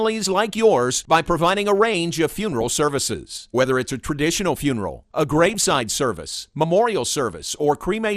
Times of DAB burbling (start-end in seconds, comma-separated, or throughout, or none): 2.38-2.73, 5.23-5.78